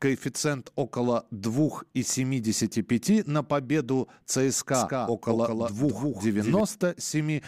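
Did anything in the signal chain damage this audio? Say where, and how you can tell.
Yes. From 4.74 s to 6.60 s the speech is doubled: a second full-band copy trails roughly 200 ms behind, a few decibels quieter, with no reverb tail, switching on and off abruptly. The likely cause is a second, slower capture path mixed in at the driver or routing stage.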